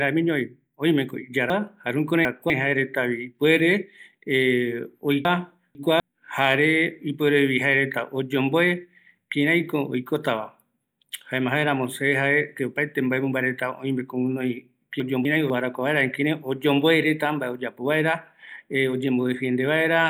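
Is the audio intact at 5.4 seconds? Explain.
No. Chunks out of order run from 5.25 to 6.0 s: a 250 ms chunk of the speech plays two chunks late, after the ones meant to follow it. Nothing is missing, but the reordering makes a jumbled stretch with three hard joins.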